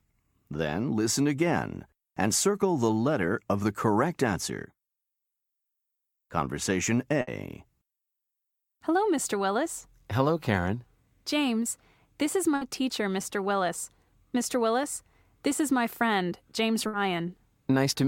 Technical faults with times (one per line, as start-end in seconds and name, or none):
7.21-7.30 burst of packet loss
12.55-12.64 burst of packet loss
16.87-16.96 burst of packet loss